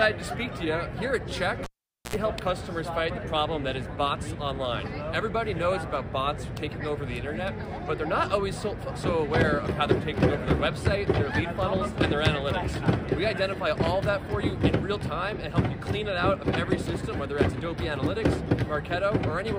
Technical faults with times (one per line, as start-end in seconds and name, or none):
1.64-2.16 cable pulled and plugged in